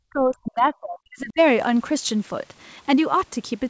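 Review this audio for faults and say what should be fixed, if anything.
Speech suppressed in double talk, 0.09 to 1.39 s: the speech dips by around 40 dB, likely because the echo canceller treated overlapping talk as echo. It shows as collapsed waveform stretches and dark spectrogram holes. Better double-talk detection in the echo canceller, so near-end speech is held during overlap, would prevent it.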